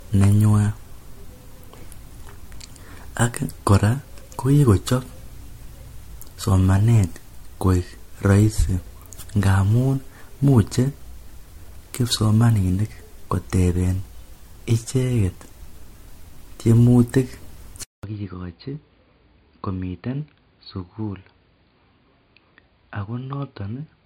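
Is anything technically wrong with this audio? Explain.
Yes, there are two faults.

Throughout the speech, the audio shows generation loss, likely from being decoded and re-encoded as 64 kbit/s MP3 about four times. Each pass requantises on a shifted frame grid, so the errors pile up. The sound is swirly, hollow and smeared, with blurred attacks and nothing above 16.6 kHz.

From 17.83 s to the end, the input switches to a poorer device. The change is likely a move to a different microphone or a headset profile, after a 200 ms silence. The band then stops at 4.8 kHz, so the sound turns dull and boxy. The level also drops by about 10 dB, and a new noise floor appears about 50 dB below the signal.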